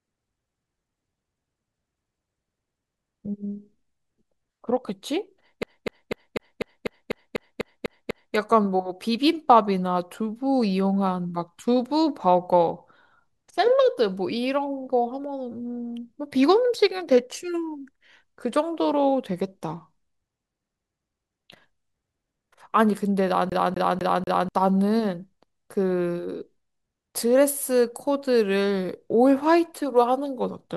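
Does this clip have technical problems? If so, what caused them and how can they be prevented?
Yes. The speech gets caught in a CD stuck on one turn twice: from 5.63 to 8.35 s the same 248 ms segment repeats 11 times, and from 23.50 to 24.49 s it repeats 4 times. A scratch kicks the laser back one track on each rotation, so playback jumps to the same spot with a brief mute at every jump. On a waveform this shows as identical blocks at a fixed spacing. On a spectrogram it appears as a comb of repeated patterns with thin vertical gaps. Cleaning or replacing the disc, or ripping it with an error-correcting drive, prevents this.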